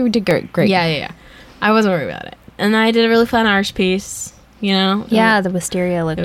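From 0.31 s to 5.31 s, periodic USB or driver dropouts occur every 1.0 s: something stalls the audio path and a couple of milliseconds of speech become silence. Each is a regular tick, seen as a thin flat gap in the waveform and a narrow vertical line on the spectrogram.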